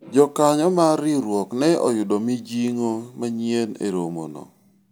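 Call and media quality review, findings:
No faults found in the speech recording. Nothing here needs a ticket.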